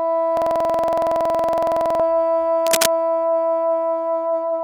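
From 0.37 to 2.00 s there's a system hang loop. Something froze while the hardware kept replaying one 46 ms slice of its buffer, which fits a 2048-sample buffer, so the sound stutters at about 21.5 Hz like a machine gun. Roughly a second and a half of real audio is lost underneath.

Then from 2.60 to 2.92 s comes cable scratch noise, a burst of rough, uneven scratching laid over the sound at about 5 dB below it. It's likely a worn cable or connector being moved, with its contact flickering as it shifts.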